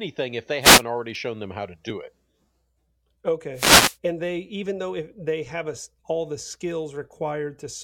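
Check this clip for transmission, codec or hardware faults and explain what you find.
There are two wireless microphone noise hits in this speech clip, one from 0.61 to 0.83 s and another from 3.54 to 3.97 s, lasting roughly a fifth and nearly half a second. Each is a quick swish of static over the voice. What's happening is an RF dropout: the FM signal from the transmitter fades as reflected paths cancel at the receiver, the receiver's own noise comes up, and in the deepest part it crackles and swamps the speech.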